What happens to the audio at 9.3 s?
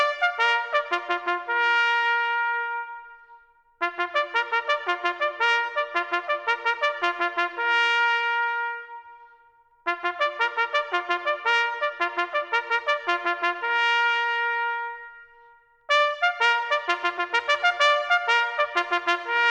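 Nothing goes wrong at 9.3 s; the audio continues intact through that moment with no dropout, click, glitch or other fault.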